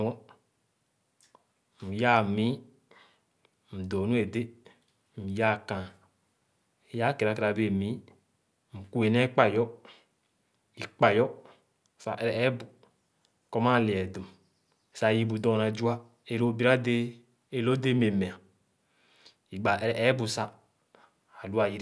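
No technical faults are audible.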